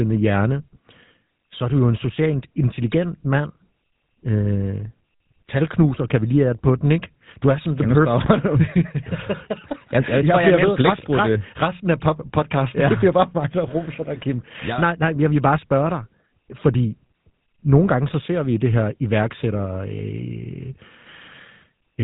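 It's a speech recording that's been through the GSM full-rate codec from start to finish, and the damage is plainly audible. Everything above about 3.9 kHz is gone, so it sounds narrow and phone-like. The codec rebuilds the voice from a vocal-tract model driven by a sparse, regularly spaced pulse train, which gives that buzzy, gravelly grain. The quality fits the old 13 kbps full-rate mode.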